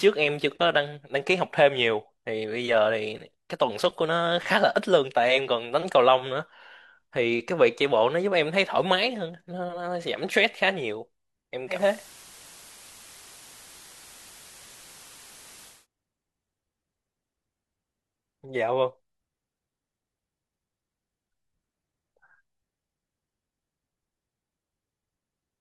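Digital radio blending to analogue, 11.66 to 15.87 s: reception drops to the FM broadcast with a 230 ms cross-fade, bringing hiss roughly 20 dB under the speech at unchanged level.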